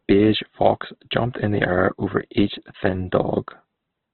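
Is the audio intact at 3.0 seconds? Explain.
No. At 3.0 s, as throughout the clip, the speech carries heavy Opus compression damage. Nothing sounds above about 4.2 kHz, and what remains is rough, grainy and noise-filled rather than swirly with spectral holes as MP3 would be, likely from Opus in CELT mode at a bitrate around 12 kbps.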